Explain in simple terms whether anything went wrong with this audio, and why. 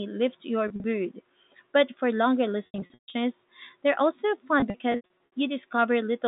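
Packet loss with pitch repetition occurs at 0.68–0.84, 2.66–3.14 and 4.6–5.32 s. Lost audio is patched with repeated sound, so it buzzes or drops out.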